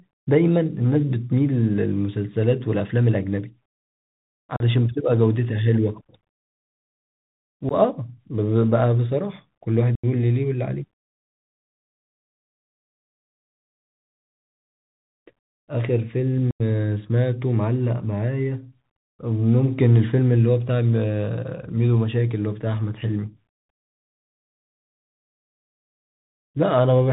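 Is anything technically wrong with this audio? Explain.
Yes. The speech runs through a Bluetooth CVSD headset codec for the whole clip. The one-bit delta coder, which fits a 64 kbps link, cuts everything above 4 kHz, so a spectrogram shows an empty band above that line. Its lagging step size makes s sounds scratchy and leaves a granular hiss that shows as a speckled floor between words.

Unconcealed Bluetooth headset packet loss punches four holes: 4.56–4.63 s (37.5 ms), 7.69–7.73 s (15 ms), 9.95–10.06 s (82.5 ms) and 16.51–16.62 s (90 ms). These range from about two to about ten lost voice packets. Each gap was filled with silence or an idle pattern, so the waveform breaks off with abrupt vertical edges, and a spectrogram shows blank vertical stripes. The speech returns briefly quieter as the coder's step size recovers.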